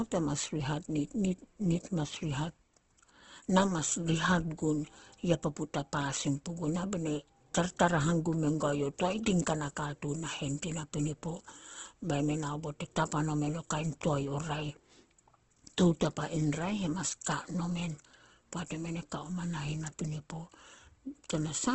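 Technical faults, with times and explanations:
Throughout: Opus compression. The speech sounds grainy and rough, tonal parts turn noisy, and nothing is heard above 8.2 kHz. This is likely Opus in its CELT mode filling bit-starved bands with folded or noise content, and the heavy damage fits about 12 kbps.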